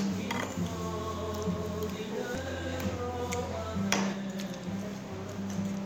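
Damaged data in the compressed stream occurs at 2.35 s. Corrupted bytes there leave the decoder unable to read the affected frame correctly, so it loses sync and hunts for the next valid frame header. The result is a brief chirp, click or short gap in the sound.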